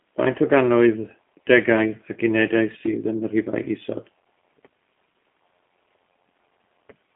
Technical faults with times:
0.00-7.16 G.729 codec

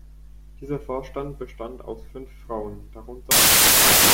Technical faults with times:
3.31-4.13 samples built from the wrong bytes

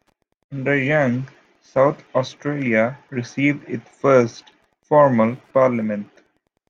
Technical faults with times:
0.00-6.69 Wi-Fi interference

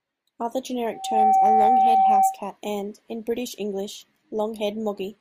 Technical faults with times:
0.92-2.40 loudspeaker feedback squeal

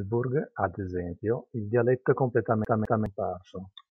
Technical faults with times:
2.65-3.06 CD stuck on one turn

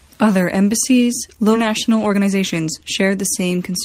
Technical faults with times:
1.53-1.55 skip ahead
1.66-3.69 jitter buffer speed-up

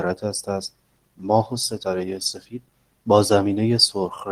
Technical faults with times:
none

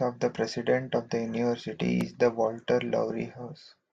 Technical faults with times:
2.01-2.03 loud pop

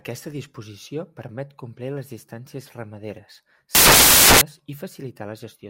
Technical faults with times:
3.75-4.41 samples built from the wrong bytes

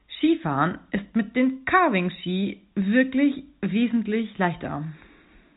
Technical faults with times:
none

